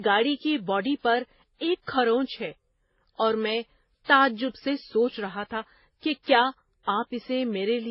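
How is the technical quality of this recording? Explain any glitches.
Technical quality is poor throughout the speech. The sound is muffled, with nothing above 5.5 kHz, and the artefacts of several codecs are heard together. This likely comes from transcoding between lossy codecs, which fits a low-rate MP3 passed through HE-AAC and then WMA. Each stage kept the earlier damage and added its own.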